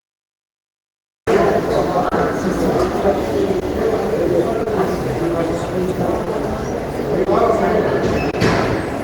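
Throughout the clip, the sender's clock runs roughly 2 percent slower than the receiver's. This is clock drift between sender and receiver. The jitter buffer keeps draining, so the receiver keeps patching timing, and small hiccups recur at uneven intervals across the whole recording.

The stream began late, which produces a cut-off start. Digital silence runs from 0.00 s until the sound abruptly appears at 1.27 s, mid-sound, with no natural attack or fade-in and an abrupt edge at the entry point.

Packets arriving late emptied the buffer seven times, each causing a short stall from a late packet, at 0.49, 2.08, 3.59, 4.63, 6.24, 7.24 and 8.30 s. The receiver held the last sound for 20 to 30 ms each time, then resumed without losing anything. Each stall is a brief smeared hold with a slight buzz or dip.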